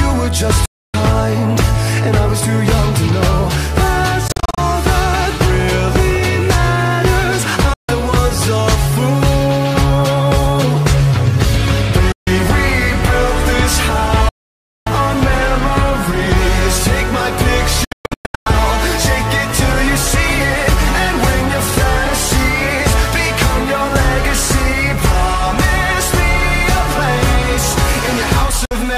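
The audio cuts to silence at 0.65–0.94, 4.28–4.58, 7.73–7.89, 12.12–12.27, 14.29–14.87, 17.84–18.47 and 28.65–28.71 s, with the longest gap around 0.57 s. These are likely Bluetooth dropouts: packets arrived too late and were discarded, and playback resumed further along as though the sound had continued. At 4.28 s and 17.84 s the losses come in broken bursts, with runs up to 40 ms and 120 ms. On a spectrogram these appear as blank vertical slabs with sharp edges across all frequencies. In the waveform they show as flat-line gaps.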